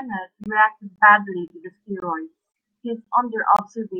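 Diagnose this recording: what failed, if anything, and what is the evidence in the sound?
The failure is a gap between chunks at the streaming or playback stage: the speech arrived in half-second chunks, and each join received about 21 ms of inserted silence. The holes start at 0.44, 0.96, 1.48, 2.00, 2.52, 3.04 and 3.57 s, recurring every 0.52 s. None of the speech is lost, but it stops abruptly at each join, with hard-edged dropouts cutting through the sound.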